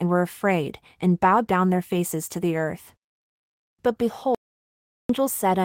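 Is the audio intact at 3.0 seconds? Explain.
Yes, at 3.0 seconds the speech plays through intact, with no dropout, click, distortion or other fault to be heard.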